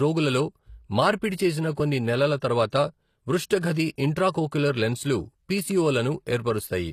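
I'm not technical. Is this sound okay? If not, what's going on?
No, there are two problems with this speech recording.

HE-AAC compression, throughout: the bright, high part of the sound is likely rebuilt by HE-AAC, which copies lower sounds upward instead of keeping the real ones. That makes s sounds gritty or lispy, and nothing remains above about 15 kHz.

Pre-echo, at 2.70 s, between "మార్పిడి చేసిన కొన్ని నెలల" and "పృష్ఠ గది ఇంట్రాకోక్యులర్ లెన్స్లు", and from 3.61 to 3.63 s, just before "గది ఇంట్రాకోక్యులర్ లెన్స్లు పిసిఓ": the compression spreads its noise across a short stretch, so a short hiss arrives just before a sharp sound begins, softening its start.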